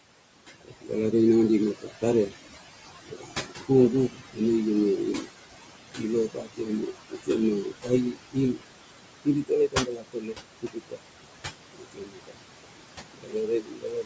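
In this speech clip the noise suppressor, working throughout and pulling the steady room noise down by about 21 dB, leaves noise suppressor artifacts: the background dips between phrases and swells beneath them. It also mistakes parts of the speech for noise and attenuates them, so speech is cut by the noise suppressor and sounds swallowed or faint at 0.61–0.92 s (just before "re nangadi mep"), 1.82–2.34 s (just after it), 3.04–4.4 s, 5.19–5.28 s, 5.88–8.62 s, 9.25–11.01 s, 11.73–12.47 s and 13.13 s to the end. Dips reach about 12 to 22 dB, and within each span only a fraction of a second to roughly a second is actually pulled down.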